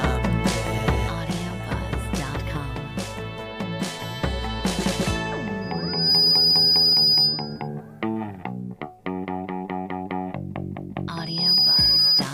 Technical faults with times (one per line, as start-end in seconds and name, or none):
5.61-7.68 loudspeaker feedback squeal
11.11-12.24 loudspeaker feedback squeal